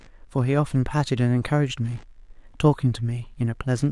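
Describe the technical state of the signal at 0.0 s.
A faint buzzy chirping, pulsing around seventy times a second and sitting roughly 35 dB below the speech, is already present at 0.0 s and runs through the whole clip. This is computer activity noise: processor or graphics load shifts the shared audio ground, independent of the speech.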